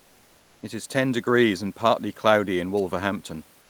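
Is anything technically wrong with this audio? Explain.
Yes. From 0 to 0.61 s and again from 3.61 s to the end, comfort noise replaces the background: a steady, featureless hiss, about 1 dB and about 2 dB quieter than the real room noise. The likely cause is discontinuous transmission, with the decoder synthesizing noise during pauses, as Opus DTX does.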